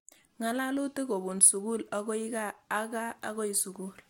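Nothing technically wrong turns up anywhere in this bit of speech, so there's no fault to point to.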